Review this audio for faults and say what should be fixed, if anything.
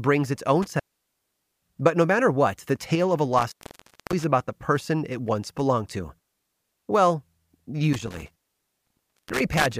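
Intermittent contact cuts the speech at 0.62 to 1.79 s, 3.37 to 4.24 s (between "the tale of a" and "about the person it") and 7.93 to 9.73 s. Each time a loose connection opens for 0.83 s, 0.59 s and 0.94 s, dropping the signal with crackle at the edges. Reseat or replace the suspect cable and connectors, and strain-relieve the leads before recording.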